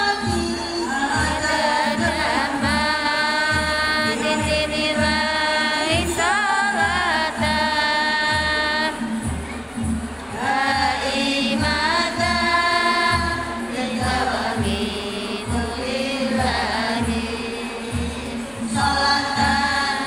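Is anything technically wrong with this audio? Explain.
No, nothing stood out as technically wrong on listening to this audio.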